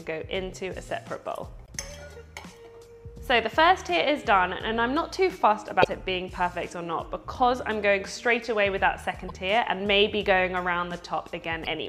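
Brief chirps or squawks break into the sound at 1.64–1.69, 5.80–5.85, 9.28–9.31 and 11.63–11.67 s: damaged data in a compressed stream, where the decoder misreads corrupted frames and loses sync.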